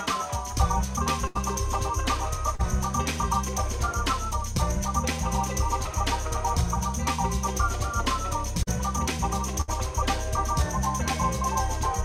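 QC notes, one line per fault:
1.27–1.37 s, burst of packet loss: about 80 ms of audio never arrived, so the receiver stretched the last sound across roughly 74 ms while fading it down. It comes out as a held, dulling tail before the audio jumps ahead past the missing stretch.
2.55–2.61 s, short concealed packet loss: about 40 ms went missing, and the decoder patched roughly 37 ms by extending what came just before and blending back in. The result is a brief smear or wobble rather than a clean break.
8.63–8.69 s, short concealed packet loss: the same kind of 40 ms dropout, with about 38 ms synthesised from the preceding sound and crossfaded into the real signal. It is heard as a quick blur.
9.61–9.70 s, burst of packet loss: about 60 ms was lost, and the receiver covered it with about 64 ms of the last sound continued and decaying. It is audible as a fading hold, followed by a skip where that segment is gone.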